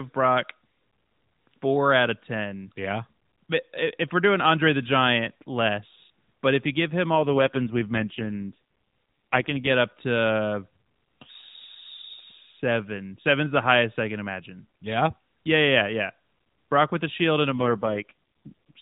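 From 7.14 to 9.71 s, just after "if you give him" and until "up to", an AMR rate drop makes the speech buzzier and more synthetic. A second drop starts at 17.50 s, after "with a shield and", and lasts to the end. The sound points to the codec falling from about 12.2 to 4.75 kbps to protect a weak link. A spectrogram keeps the same 4 kHz ceiling and the waveform shows no gap, but the harmonics blur into coarser, smeared texture.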